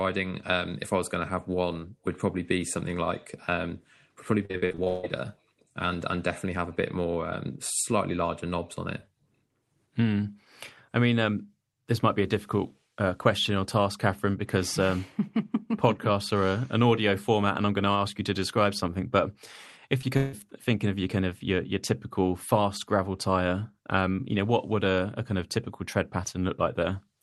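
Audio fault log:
4.45–5.05 s, repeated packet loss (robotic sound): right after "um would probably" the sound turns choppy, with pieces missing. Eight gaps in about 0.6 s, the longest about 150 ms, were each patched by stretching the last sound, so roughly 60% of this stretch is filler.
20.01–20.05 s, short concealed packet loss: a brief smear or wobble. About 20 ms of audio arrived too late to decode, and the receiver bridged the hole by continuing the preceding sound before blending back into the real signal.
20.17–20.35 s, long network dropout: just before "thinking of your kind" there is a fading buzz or hiss of about 160 ms where the audio should be, and it never falls to silence. This is likely a network dropout: the receiver extended the last sound across the missing stretch.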